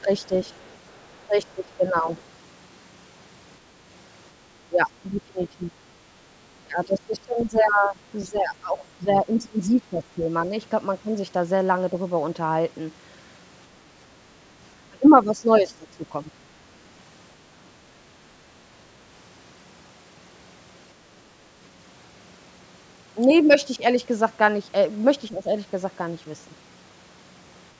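Speech suppressed in double talk opens the clip at 0.05 to 0.34 s. The echo canceller was likely unable to tell the talker apart from the far end's sound arriving through the loudspeaker, so it pulled the whole microphone signal down, here by about 10 dB for brief moments. From 0.24 to 1.53 s the other side's voice is leaking through. This is likely residual echo the canceller failed to subtract, sitting faintly, about 35 dB below the talker. More suppression follows at 1.55 to 2.08 s, again shallow, and a second brief leak comes at 2.15 to 2.22 s. The suppression then grows heavier, reaching about 20 dB at 4.67 to 5.74 s, 6.62 to 10.29 s and 14.85 to 16.29 s. In the longest of these, roughly three seconds of the talker's sound is turned down. A last shallow dip comes at 25.28 to 25.49 s. Throughout, the band stops at 8 kHz from the call's microphone processing.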